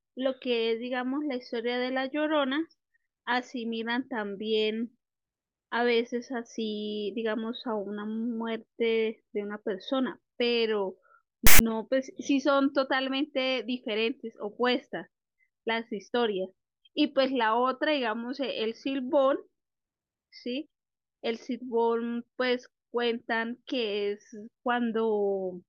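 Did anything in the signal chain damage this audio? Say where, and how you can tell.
Yes. File tags played as audio, 11.47 to 11.60 s, a storage fault. Metadata text stored in the file was decoded as samples, so a hard-edged burst of loud, one-sided rasp is followed by dead silence where the tag's zero padding was read.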